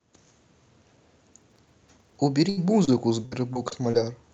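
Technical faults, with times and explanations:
1.34 to 2.16 s, processor overload crackle: buffers of roughly 1.5 ms miss their deadlines many times running. Each miss replays old audio, giving a gritty crackle.
2.49 to 2.59 s, burst of packet loss: about 80 ms never arrives. The last sound is stretched and faded, then speech resumes further on.
2.85 to 2.89 s, short concealed packet loss: about 20 ms is missing. The receiver continues the last sound and blends back, leaving a brief smear.
3.25 to 3.95 s, repeated packet loss (robotic sound): four gaps, 120 ms in total, longest 62 ms. Repeated patching makes the speech choppy and robotic.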